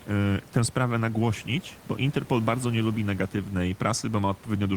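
No technical faults are audible in this recording.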